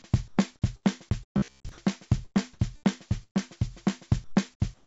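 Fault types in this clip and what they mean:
Comfort noise in place of the background: From 0.28 to 0.38 s, and again from 4.24 to 4.85 s, the natural background gives way to a smooth, detail-free hiss. In the first spot it drops by about 7 dB, against a background already about 37 dB below the loudest sound. The likely cause is discontinuous transmission: the sender judged these stretches silent and stopped sending, so the receiver synthesised noise roughly matching the background.
Sound chopped by the voice detector: Between 1.16 and 3.75 s the sound turns choppy. Quiet parts and edges of sounds drop out, with about 287 ms in total swapped for filler noise. The likely cause is the sender's voice detector repeatedly toggling between sending and muting, cutting off softer material each time it wrongly decided nothing was there.
Robotic sound from repeated short buffers: From 1.38 to 1.69 s the audio hardens into a metallic buzz at 66.7 Hz that only loosely follows the underlying sound. 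Most of this stretch is repeated material rather than new audio. The likely cause is that fresh audio arrived too rarely, so playback kept looping the last chunk. A 66.7 Hz buzz fits a loop about 15 ms long, which imposes that rigid pitch.
Burst of packet loss: At 3.23 to 3.37 s the last sound is held and stretched for about 117 ms, fading away into a brief silence. Playback then picks up further along, with about 120 ms of audio skipped. This happens when a run of packets is lost or arrives too late: the receiver extends and turns down what it last had, then jumps ahead once data returns.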